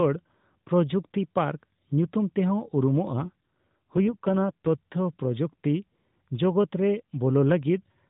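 Speech over a narrowband mobile link, with an AMR rate drop from 3.08 to 4.69 s: the voice turns buzzier and more synthetic, consistent with the codec stepping down from 12.2 kbps to 5.9 kbps. On a spectrogram the harmonics blur while the 4 kHz ceiling stays put, and the waveform shows no gap.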